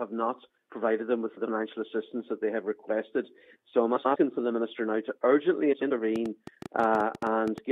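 A brief garbled flutter occurs at 1.28–1.47 s, 3.96–4.16 s and 5.72–5.92 s. These are frames out of order: two adjacent runs of about 93 ms each were decoded swapped, so no time is lost.

From 6.16 to 7.59 s, a train of clicks ticks unevenly over the sound, about fifteen clicks at roughly 9 per second and some 10 dB above it, likely from electrical interference or a faulty connection.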